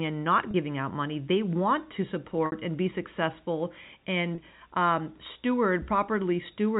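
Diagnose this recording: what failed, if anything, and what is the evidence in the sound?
Packet loss with pitch repetition, a network fault, occurs three times in the G.711 telephone-band speech: 0.51–0.54 s after "and not", 2.46–2.52 s after "want to", and 4.35–4.38 s. The receiver bridged each gap by looping the last pitch period, giving a brief held buzz. A spectrogram shows frozen, flat harmonic stripes, and the waveform shows identical repeated cycles. The 30 ms gaps fit single lost packets, and the 60 ms gap fits two.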